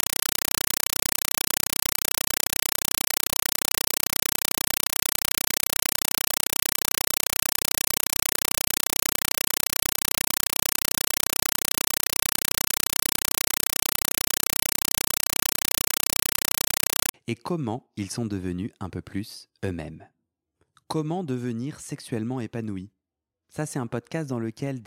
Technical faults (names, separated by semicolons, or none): compressed stream played as audio